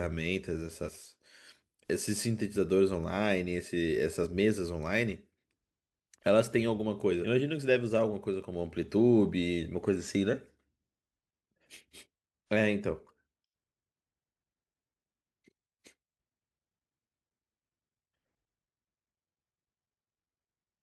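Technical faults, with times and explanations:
0.85–0.89 s, compressed frames skipped: about 100 ms of audio drops out, consistent with two whole frames that were missing or rejected by the decoder as damaged. The jump size fits a frame length of about 43 ms.
4.22–4.26 s, compressed frames skipped: a single frame, about 40 ms, is lost.
7.21–7.25 s, compressed frames skipped: roughly ten frames, about half a second, vanish.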